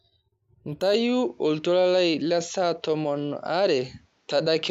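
From 0.94 s it goes duller, nothing above 7.6 kHz, with faint new background noise and no gap, likely the input switched to a poorer device.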